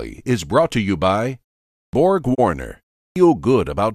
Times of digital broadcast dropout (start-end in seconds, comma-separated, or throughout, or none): 2.33-2.40